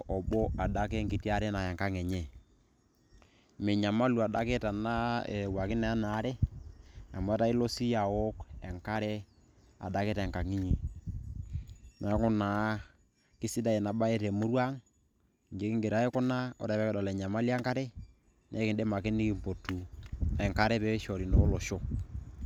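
No technical faults can be heard anywhere in the recording.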